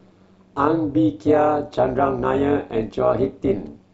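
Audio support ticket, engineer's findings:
Overlap-add ripple, throughout. Metallic buzz with extra tones on the speech, level swinging about 11 dB at around 200 Hz. Probable component: frame-based processing stage. Windowed frames recombined with overlap that doesn't sum to constant gain, so level dips once per frame.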